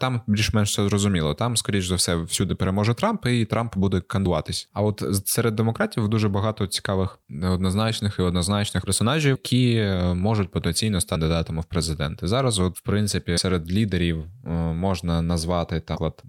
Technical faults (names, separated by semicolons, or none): compressed frames skipped